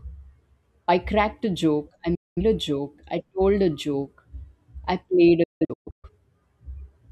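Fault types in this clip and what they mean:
Digital broadcast dropout: The receiver lost valid frames and muted. After "cracked a joke I", the speech fades out in 8 ms and is silent from 2.15 to 2.42 s. After "I played", 5.43 to 6.09 s breaks into several short holes, the longest 0.17 s.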